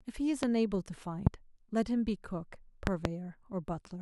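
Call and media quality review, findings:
Loud pop at 0.43–0.46 s and 1.27–1.29 s, double pop at 2.87–3.08 s, peaking roughly 20–25 dB above the speech, which continues underneath. Likely a voltage step or pulse from a plug, switch, static or driver glitch, shaped downstream into a sharp thump.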